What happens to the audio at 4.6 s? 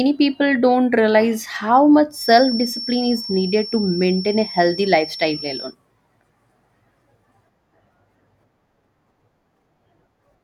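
A feedback whistle sounds from 2.09 to 5.76 s, after "how much": a 5.4 kHz tone well beneath the speech, likely a loudspeaker-to-microphone loop held near feedback, which shows as a flat spectrogram line.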